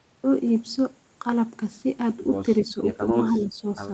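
Speech, with two brief dips in level. The first runs from 2.68 to 2.78 s. The second runs from 3.39 to 3.63 s. Each drop is shallow, around 5 dB at its deepest. The talker fades slightly rather than cutting out. This is likely speech suppressed in double talk. The echo canceller seems to have heard the far side talking at the same moment. It could not separate the near talker from loudspeaker echo, so it pulled both down together.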